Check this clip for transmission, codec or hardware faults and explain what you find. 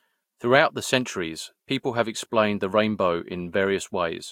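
No transmission, codec or hardware faults can be heard in this speech recording, and the signal arrives intact without any dropouts, distortion or interruptions.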